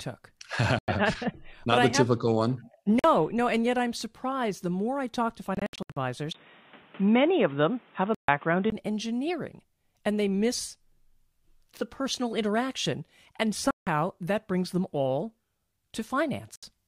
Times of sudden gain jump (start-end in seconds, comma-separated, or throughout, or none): none